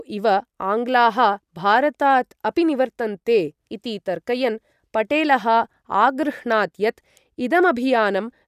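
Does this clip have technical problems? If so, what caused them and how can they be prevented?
No, nothing in this speech recording stood out as a technical problem on listening.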